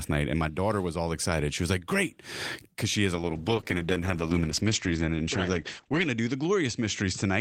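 A call bitrate drop starts at 3.16 s, just after "because she has a", and runs to the end. The encoder was given far fewer bits, consistent with falling from 32 to 10 kbps, so the sound turns coarse and watery, muffled above 8 kHz.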